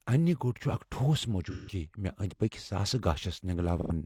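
Speech with two short smeared, phasey patches, at 1.50–1.74 s and 3.81–3.91 s. This is AAC frame loss with concealment: about 171 ms and 85 ms went missing, which fits four and two lost frames, and the decoder filled each gap from the last good spectrum.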